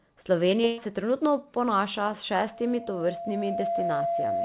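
From 0.64 to 0.80 s, just before "se trenutno ponaša", a burst of packet loss removes about 140 ms of sound. The receiver fills the gap by repeating and fading the last fragment. On a spectrogram this shows as smeared, flattened harmonics that dim. The waveform shows decaying repeated cycles, then an abrupt resumption.

At 2.48 s a loudspeaker feedback squeal starts. Mic and speaker form a loop whose gain at 682 Hz exceeds one. The tone swells over about a second and a half to roughly the speech level and lasts to the end. A spectrogram shows one brightening horizontal line at 682 Hz, below the 4 kHz ceiling of the call path. The waveform shows a growing steady sinusoid beneath the speech.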